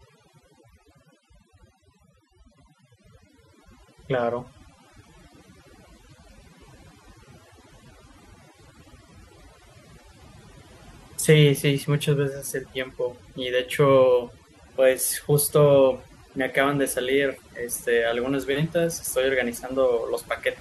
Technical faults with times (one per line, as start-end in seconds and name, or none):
0.00-20.60 overdone noise removal